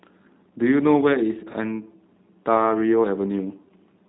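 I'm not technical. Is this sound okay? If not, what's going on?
No. The speech went through a G.729 codec, a low-quality phone-call compressor that rebuilds the voice from a rough model. Throughout the clip, nothing above 3.8 kHz survives, so it sounds muffled, and the rebuilding adds a plainly audible rough, synthetic edge.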